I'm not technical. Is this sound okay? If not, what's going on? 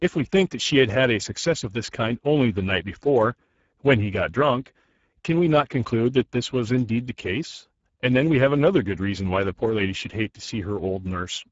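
No. The whole clip went through the Speex codec, an old voice-chat format, so the speech sounds hoarse and grainy, with the top end missing.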